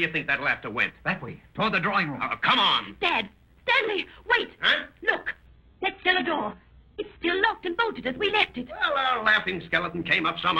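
From 2.80 s to the end, an overlap-add ripple sets in. The audio was rebuilt from windowed frames whose overlap doesn't sum evenly, so the level swings by about 6 dB around a hundred times a second. That rate, fast and perfectly steady, makes a metallic buzz with extra tones around each note rather than the slower, freer wobble of a tremolo effect.

Between 5.46 s and 7.46 s, the adaptive stream drops to a lower bitrate. Everything above 5 kHz vanishes at once and the sound turns thin, pointing to a fall from a fairly high AAC rate to a very low one. Unlike a dropout, there is no gap. The quality simply switches down and back.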